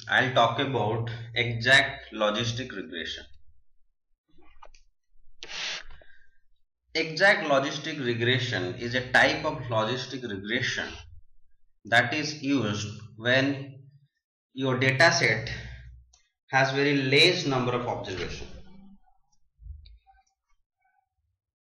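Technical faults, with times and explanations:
No technical faults can be heard anywhere here.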